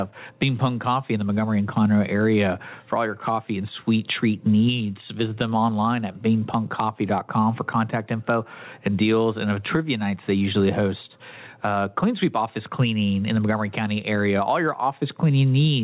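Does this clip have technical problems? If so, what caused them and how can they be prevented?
Yes. Throughout the speech, the gain swings by about 20 dB as loud sounds pull it down, squashing the dynamics. This is gain pumping, likely from microphone gain set far too high, with a fast limiter pulling each peak down. Lowering the input gain prevents it.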